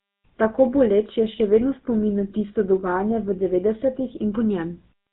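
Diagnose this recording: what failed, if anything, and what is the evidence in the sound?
The failure sits at the codec stage. The whole speech recording has passed through the GSM full-rate codec. A buzzy, gravelly roughness runs from start to finish and is plainly audible. Nothing is heard above 4 kHz, so sibilants sound dull. The codec models the vocal tract as a filter and excites it with a sparse, regularly spaced pulse train, discarding two of every three excitation samples. That coarse excitation is the source of the grit. The sound fits the 13 kbps GSM full-rate coder.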